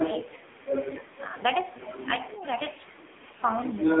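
From start to finish the speech has gone through an AMR narrowband mobile codec, and it's squeezed hard. The band runs only from about 300 Hz to 3.6 kHz, so there's no low body and no air on top. The codec models the vocal tract and drives it with a handful of pulses per tiny frame, and here the damage is heavy. That buzzy, synthetic edge fits one of AMR-NB's low modes, around 5.9 kbps.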